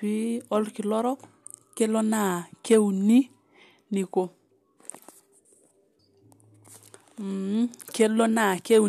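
No technical faults can be heard anywhere in it.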